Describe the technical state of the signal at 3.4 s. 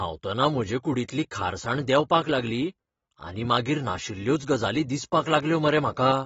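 At 3.4 s the speech is dull and smeared, with a fizzy warble on sibilants, and this runs through the whole clip. It is likely AAC compression at a low bitrate, near 28 kbps, quantising coarsely. A spectrogram shows a hard ceiling at 7.7 kHz.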